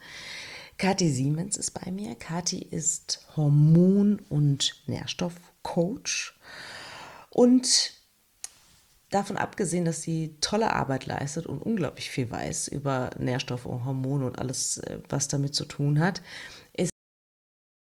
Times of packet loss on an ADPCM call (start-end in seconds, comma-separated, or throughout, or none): none